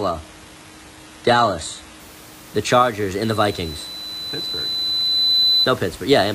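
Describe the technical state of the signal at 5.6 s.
A piercing steady tone near 4 kHz dominates at 5.6 s, sitting a little above the speech. This is loudspeaker feedback squeal, running from 3.24 to 5.71 s after swelling over about two seconds. The microphone is re-amplifying its own loudspeaker until that frequency runs away.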